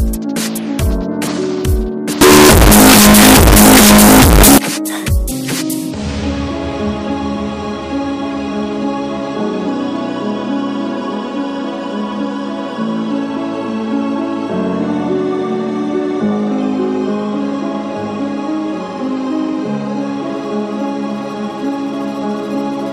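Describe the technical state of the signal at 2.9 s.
At 2.9 s the signal sits inside a stretch of very loud, harsh distortion running from 2.21 to 4.58 s, with quiet moments as loud as everything else. The likely cause is signed and unsigned mixed up on 16-bit samples: the flipped top bit turns every zero crossing into a full-range jump.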